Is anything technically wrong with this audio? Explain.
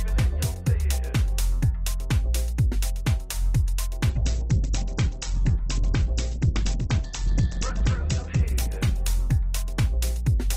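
Yes, there's a call bitrate drop from 4.1 s to the end. The bandwidth estimate fell, so the encoder starved, apparently from around 128 kbps to roughly 10 kbps. The top end narrows from 20 kHz to 8 kHz, leaving the sound muffled and coarse, never recovering.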